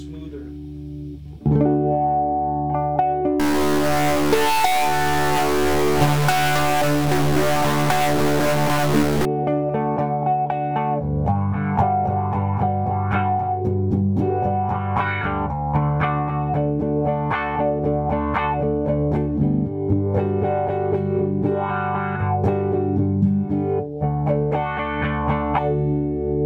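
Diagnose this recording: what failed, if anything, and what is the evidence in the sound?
A stuck bit runs from 3.40 s to 9.25 s. Across that stretch the sound turns harsh and buzzy, and the quieter moments fill with a gritty noise floor instead of falling silent. The stage is most likely the converter or a digital data line where one bit has jammed at a fixed value. Roughly half the samples are then pushed off by that bit's weight, a step of around -20 dBFS. The error also flips with the sign of low-level signal, which is why near-silence turns into noise.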